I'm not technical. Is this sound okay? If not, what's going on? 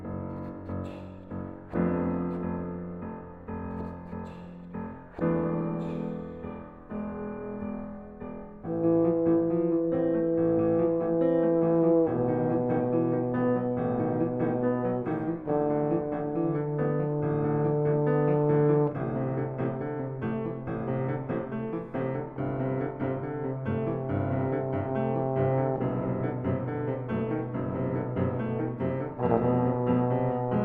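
Yes, this sound is okay. Nothing in it stands out as a technical problem.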